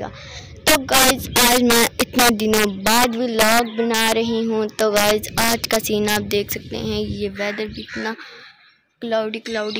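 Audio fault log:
Throughout: integer overflow. The gain runs about 10 dB too hot, and instead of limiting, the loudest peaks wrap straight to the opposite sign. Only a small share of samples, around 2 percent, go over, but each one snaps into a harsh crack far nastier than clipping.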